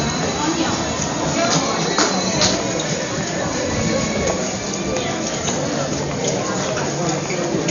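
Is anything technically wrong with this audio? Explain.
Yes. Throughout the recording the sound is dull, with nothing above 6.9 kHz, and a rough, fluttering noise clings around tonal parts. This is likely heavy Dolby Digital compression at a bitrate around 48 kbps, where the encoder cuts the band and the decoder fills starved frequency lines with dither noise.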